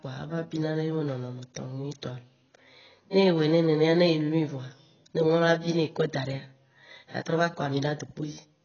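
From start to finish the speech carries heavy AAC compression damage, likely from AAC-LC running at a very low rate, which fits something around 16 kbps. Nothing reaches above 6.8 kHz, so the top octave is gone and the sound is dull and smeared. With too few bits per frame, the encoder drops and coarsely quantises spectral lines, leaving gaps that smear transients and give sibilants and held vowels a warbling, fizzy texture.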